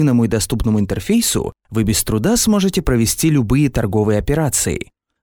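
Nothing here calls for comment, since no glitches, dropouts or other technical faults turn up anywhere in the clip.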